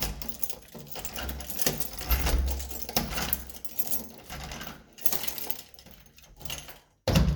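No technical faults are audible.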